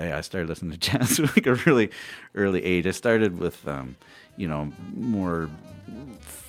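Nothing here trips any alarms, since the audio runs along without a single glitch, dropout or hiccup anywhere in it.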